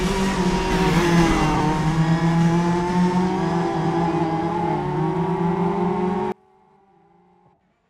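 From 6.32 s to the end, the sound collapses by about 32 dB to a faint residue, likely one channel inverted, cancelling the shared content when summed to mono.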